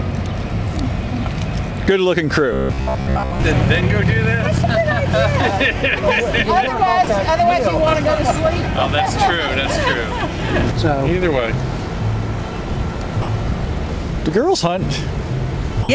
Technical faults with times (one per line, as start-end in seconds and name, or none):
2.53-3.47 robotic sound from repeated short buffers
7.04-7.07 sound dropped by the voice detector
13.22-13.28 sound dropped by the voice detector
15.83-15.89 sound dropped by the voice detector